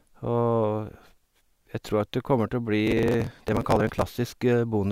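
From 2.87 to 4.02 s the processor falls behind on its short audio buffers, around 5 ms each, and misses dozens of deadlines again and again, skipping each late block. This processor overload crackle tears the speech with a gritty burst of tiny hard-edged gaps.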